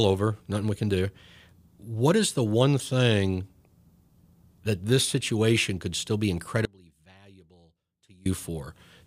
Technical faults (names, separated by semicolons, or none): audio dropout to a faint residue